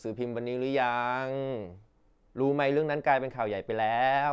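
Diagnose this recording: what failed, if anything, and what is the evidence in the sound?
Listening through the speech, nothing stood out that would point to a failure at any stage of the chain.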